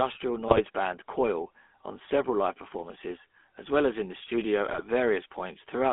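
GSM full-rate codec damage runs through the whole clip: the speech is modelled as a vocal-tract filter driven by sparse, regularly spaced pulses, which fits a 13 kbps GSM full-rate coder. The result is plainly audible buzzy, gravelly roughness, with the band held to about 200 Hz to 3.5 kHz.

GSM bit errors strike from 0.48 to 0.61 s and again from 4.68 to 4.81 s, right after "as in the studio". Corrupted filter, pitch and gain values reach the decoder, which fits about six damaged 20 ms frames each time, so the speech briefly breaks into squawking, gargling distortion.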